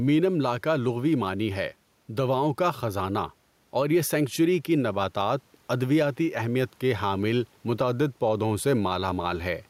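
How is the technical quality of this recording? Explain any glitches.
Gain pumping runs through the whole speech clip. The room noise sits about 42 dB below the speech. The gain swings by about 5 dB. The likely cause is input gain set far too high, with a fast limiter pulling it down on each peak. Loud and soft parts end up close in level. The speech sounds squashed.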